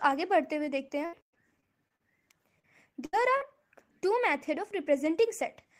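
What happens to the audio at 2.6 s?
A brief smear or wobble passes through the sound from about 2.6 to 2.65 s, where a short concealed packet loss occurs. Roughly 40 ms of audio never reached the decoder in time. The receiver bridged the gap by extending the preceding sound for about 35 ms, carrying on its pitch or shaping noise to match it, and then faded back into the real audio.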